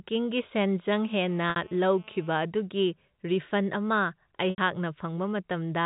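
GSM phone buzz runs from 1.04 to 2.35 s. A nearby 2G handset in an active call transmits in bursts 217 times a second, and the audio circuitry rectifies those radio pulses into the signal path. The result is a hard, raspy buzz at 217 Hz, rich in harmonics and unrelated to the speech, sitting about 25 dB below the voice and holding steady throughout that stretch before cutting off.

Packet loss with pitch repetition occurs twice, first at 1.50 to 1.56 s, inside the buzz, and again at 4.50 to 4.58 s. Audio went missing for 60 ms and then 80 ms, which fits three and four lost 20 ms packets. The receiver filled each hole by looping the last pitch period and fading it down, so the voice briefly holds and then fades into silence before the speech cross-fades back in.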